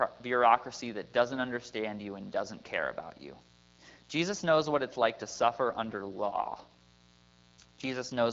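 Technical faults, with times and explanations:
Throughout: mains buzz. A raspy buzz, roughly 30 dB below the speech, is built on 60 Hz with harmonics reaching into the kilohertz range. Sharp switching spikes twice per mains cycle make it sound buzzy rather than like a smooth, pure hum.
5.67–8.32 s: AMR rate drop. Just after "what it's like to", the voice turns rougher and more synthetic until the clip ends. The bandwidth stays the same and there is no gap, which points to the AMR wideband codec stepping down from 12.65 to 8.85 kbit/s.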